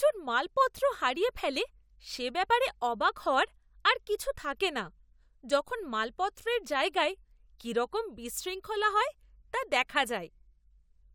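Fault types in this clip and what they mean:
The speech signal stays continuous and steady throughout, with nothing audible that points to a technical problem.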